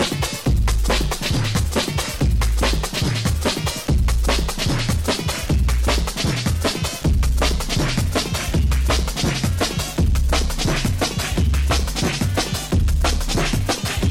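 From 7.02 s to 13.70 s, mains hum sits under the sound. A ground loop or nearby transformer couples in the 50 Hz power line. It gives a steady low drone, roughly 15 dB below the signal.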